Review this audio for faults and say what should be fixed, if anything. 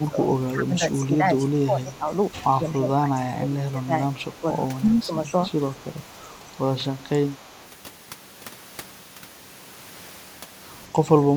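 Over the first 5.12 s, the speech repeatedly dips in level, by about 15 dB at its deepest, for around three seconds in total. A brief, shallower dip of about 5 dB follows at 10.89 to 11.01 s. This is likely speech suppressed in double talk: both sides spoke at once, and the echo canceller, unable to separate the near talker from loudspeaker echo, attenuated everything. A canceller with better double-talk detection, or a headset on the loudspeaker side, would prevent this.

Faint delayed copies of the speech appear at 1.87 to 1.97 s, 4.15 to 4.38 s, 5.01 to 5.06 s, 6.2 to 6.56 s and 7.38 to 7.68 s. Each trails the original by 242 ms, sits about 25 to 35 dB below it, and comes through as a brief scrap. The likely cause is echo leak: the far side's loudspeaker feeds its microphone, and its echo canceller lets some of that through. Using a headset or retuning that echo canceller would stop the return.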